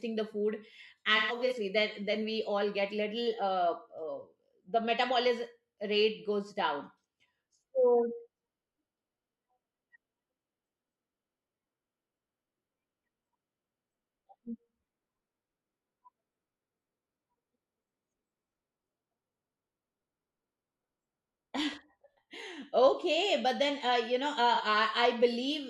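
At 1.16 s, just after "the food", AAC frame loss with concealment sets in and lasts until 1.53 s, before "then then we all". About 213 ms of audio is missing, scattered across 341 ms. The longest gap runs about 150 ms, which fits several lost frames. The decoder patches each hole from the last good spectrum, so the sound turns smeared and noisy. At 24.54 s, a single 43 ms loss leaves a brief phasey blur.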